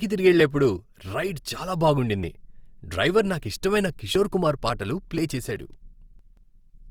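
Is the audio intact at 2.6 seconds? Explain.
No. At 2.6 seconds, as across the whole clip, the speech sounds grainy and rough, with a noisy texture where tones should be clean. That's likely Opus compression in its music mode, filling starved bands with folded or noise content, which fits roughly 24 kbps.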